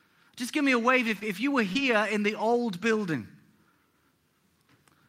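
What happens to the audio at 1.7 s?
Right around 1.73 to 1.77 s there's a short concealed packet loss: about 20 ms of the call arrived too late for the decoder, so it improvised, stretching the last bit of sound to cover the hole and then blending back. You hear it as a quick smear or wobble in the speech.

Overlapping that, from 1.75 to 1.77 s, you get a lost packet rebuilt from error correction. The following packet carried a low-bitrate spare copy of those 20 ms, and the decoder played that instead, so there's no gap there, just a rougher, noisier patch.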